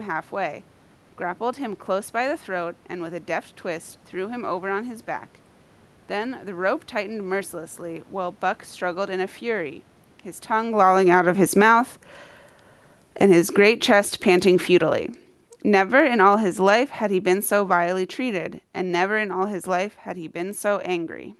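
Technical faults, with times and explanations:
10.5 to 11.77 s and 13.06 to 20.94 s, automatic gain falling: the gain control judged the input too loud and pulled its gain down gradually, by about 11 dB in the first stretch and about 15 dB across the long second one. Speech and room noise sink together rather than the voice alone fading. This happens around the point near 10.5 s where the talker shifts at the microphone.
13.82 to 14.52 s, automatic gain rising: partway into the long fall, the gain control briefly judged the level too low and pushed its gain back up by about 5 dB over roughly 0.7 s. The speech and its background noise swell together for that moment, then resume their slow decline as the downward correction takes over again through to 20.94 s.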